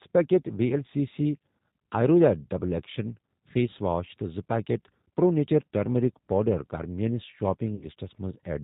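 Throughout, the speech sounds band-limited, rough and faintly synthetic, with nothing above 4 kHz. This is the G.729 codec's damage, consistent with G.729A at 8 kbit/s. From 7.75 to 7.87 s, the sound smears into a buzzy tone or coloured noise that fades, and the voice stays weak or distorted afterward. This is VoIP packet loss concealed by the speech codec: 60 ms went missing, fitting three lost packets, and the decoder extrapolated across the gap.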